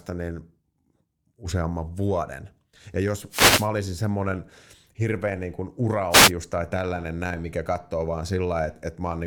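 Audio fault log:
3.30–3.69 s and 6.10–6.32 s, wireless microphone noise hit: brief swishes of static are heard, the first just before "olisin semmoinen hirveän niin", the second after "semmoinen hirveän niin kuin". Reflections briefly cancelled the FM radio signal, letting receiver noise surge up.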